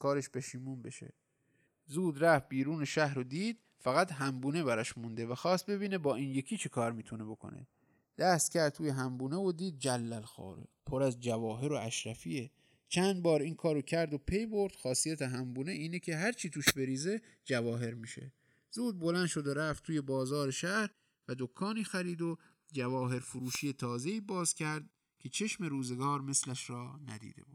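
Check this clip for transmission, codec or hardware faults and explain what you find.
Two faults show up here. Throughout the speech there's channels drifting apart: the two sides were captured on separately clocked devices, off by a few tens of ppm, so the delay between them creeps up to around a millisecond. In mono, that moving offset sweeps comb notches through the spectrum, giving a slow flanging swirl.

There are also two wireless microphone noise hits, at 16.63 to 16.75 s and 23.40 to 23.70 s. The analogue FM radio link faded as reflections cancelled, so receiver noise surged up over the signal. Each one comes through as a brief burst of static, with the second lasting noticeably longer.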